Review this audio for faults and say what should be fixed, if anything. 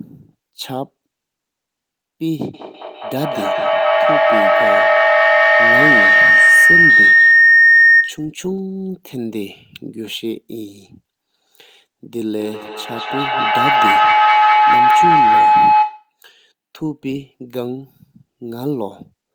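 Feedback howl runs from 2.54 to 8.32 s and again from 12.4 to 16.2 s: a microphone and loudspeaker on the same call share a room, so each trip round the loop adds level and the repeats swell rather than die away. The first settles near 2 kHz, the second near 1 kHz, both pulsing roughly every fifth of a second and peaking about 12 dB and 10 dB above the speech. A spectrogram shows a bright horizontal line brightening over time; the waveform shows a swelling, pulsing envelope. Mute one device, or use headphones, whenever two endpoints join from one room.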